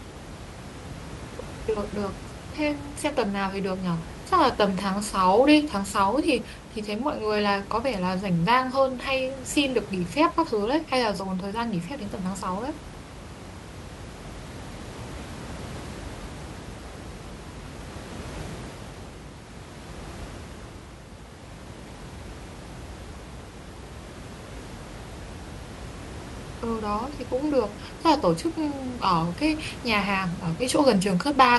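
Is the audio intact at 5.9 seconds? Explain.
Yes, the speech is intact at 5.9 seconds, with only the room's own background noise audible underneath it, at about 15 dB below the voice.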